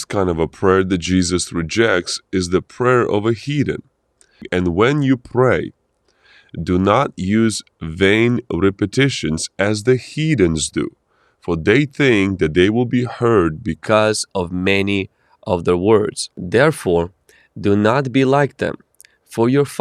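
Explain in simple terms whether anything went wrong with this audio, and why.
Something did go wrong. From the very start up to about 13.87 s, the speech is a section at the wrong speed. It plays at roughly 0.89 times its proper rate, so everything comes out slower and about two semitones lower, dragging and a bit deep. Speed and pitch sink together, which most likely means that stretch was played back or edited against the wrong clock. Right after 13.87 s, it snaps back to normal.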